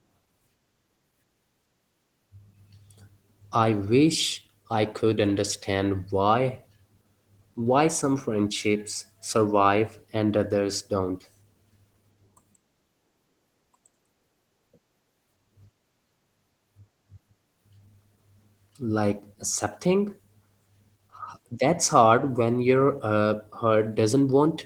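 From start to finish the speech sounds hoarse and faintly robotic. This is Opus voice compression in hybrid mode: a linear-prediction layer codes the lower band and a thin transform layer the top, and the coarse excitation fits roughly 16 kbps.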